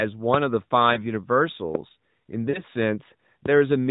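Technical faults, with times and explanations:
0.94–1.05 s and 2.50–2.62 s, lost AMR speech frames: The speech briefly blurs into a warble, about 20 ms worth at 0.94 s, then a longer, more drawn-out smear of about 40 ms at 2.50 s that sags in level before the voice returns rough. Corrupted frames failed their check, so the decoder stood in for them by repeating the last good pitch and vocal-tract shape at falling gain. The second gap fits two consecutive 20 ms frames. The surrounding narrowband audio stays below 4 kHz.
1.75–1.77 s and 3.46–3.48 s, loud pop: A single sharp pop cuts through the speech each time. The first peaks about 20 dB above the speech and the second about 15 dB above it, while the talking carries on underneath. Each is a sudden voltage pulse added to the signal and briefly shaped by the circuitry after it, likely from a plug, switch contact, static discharge or driver glitch.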